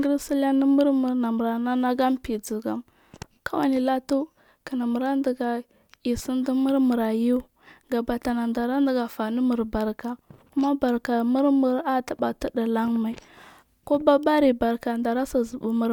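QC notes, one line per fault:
Nothing to flag on this speech recording; no faults came up anywhere in it.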